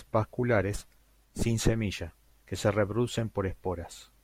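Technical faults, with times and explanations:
No technical faults are heard in the speech.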